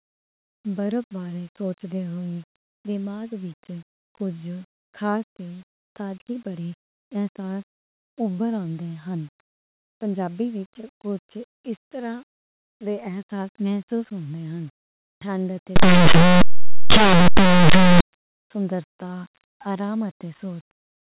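From 15.76 to 18.01 s, just after "ٹھنڈ تے", linear audio read as companded turns the speech into harsh, very loud distortion. Plain 8-bit samples are expanded as mu-law, so values just on one side of zero become huge while those on the other side stay small. Unlike clipping, even quiet passages blast loudly.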